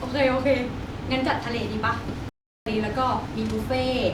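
At 2.29 s the speech cuts out dead and stays silent until 2.66 s, a gap of about 370 ms. That's a playback stall: the output simply stops mid-flow rather than fading or glitching, which is the signature of a player that likely ran dry of buffered data or had its audio thread held up, so nothing reached the output until it caught up. It's long enough to register clearly as a hole in the speech.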